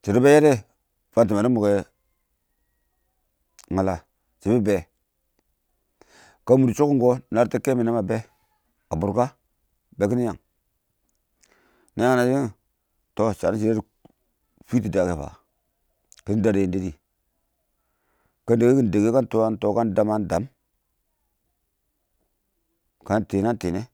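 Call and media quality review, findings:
No technical faults found in the speech signal; level, continuity and frequency content hold steady throughout.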